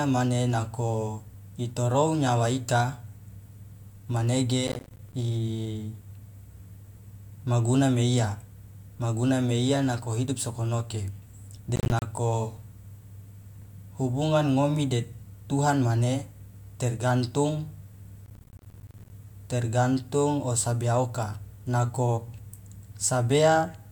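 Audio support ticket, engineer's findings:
Processor overload crackle at 4.67–5.14 s (ends before "imaguna meiya"), 11.76–12.02 s, and 18.26–19.10 s (ends before "tergantung o sabea oka"). Gritty tearing over the speech. The CPU repeatedly misses deadlines on buffers of around 10 ms, each dropped as a hard-edged silent gap. The longest burst is the third.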